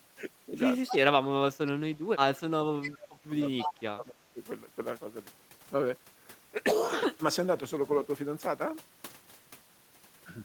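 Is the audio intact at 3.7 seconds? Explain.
No. At 3.7 seconds two faults overlap. The first is an echo leak from 3.59 to 3.71 s. The far end's echo canceller likely failed to fully cancel what its microphone picked up from its loudspeaker, so that residue was sent back down the line. It arrives 272 ms late as a short copy of the speech, only a little quieter than the live talker, and smears the sound just before and at the moment asked about.

The second is speech suppressed in double talk, running from 3.65 to 4.4 s. With both sides talking at once, the echo canceller likely could not tell the near talker apart from the loudspeaker echo and turned everything down. The speech dips by as much as around 15 dB over roughly 0.7 s while the other side is speaking.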